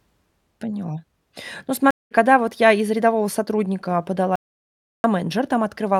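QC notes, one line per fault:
1.91–2.13 s: stream reconnect. The speech stops for about 200 ms of silence while the player drops and re-establishes the connection, then a fresh decoder picks up mid-stream. Playback resumes at a point roughly a fifth of a second further on than where it broke off, so a short stretch of speech is skipped rather than delayed, giving an abrupt jump in the flow on top of the gap itself.
4.36–5.04 s: audio dropout to silence. The speech cuts out mid-flow and about 685 ms of silence follows, with no room tone underneath, before the sound returns just as abruptly. The complete absence of any background points to the input having been lost while the recorder kept writing silence, likely from a disconnected device, a failed link or an accidental mute, and whatever was spoken in that span is gone.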